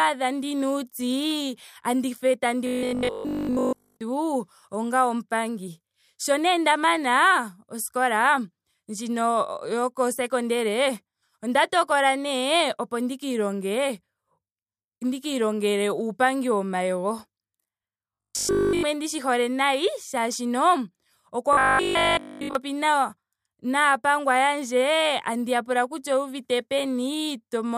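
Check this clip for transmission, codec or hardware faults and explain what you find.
One fault appears three times in the speech. Robotic sound from repeated short buffers occurs at 2.67 to 4.01 s, 18.15 to 18.83 s and 21.53 to 22.55 s. The cause is likely late-arriving audio, with the last 20 ms looped in place of essentially all the real signal. Each loop imposes a rigid 50 Hz metallic buzz that only loosely tracks the speech.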